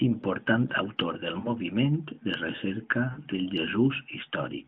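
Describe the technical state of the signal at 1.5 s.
Right after "autor del", from about 1.40 to 1.54 s, you're hearing lost AMR speech frames. A couple of frames failed their checksum, and the audible gap of roughly 40 ms fits two missing 20 ms frames. The decoder filled in by repeating the last good pitch and vocal tract settings at a dropping gain, so the sound smears and sags briefly before the signal picks up again, a little weak and rough at first. All of this sits inside the narrowband 150 Hz to 3.5 kHz AMR band.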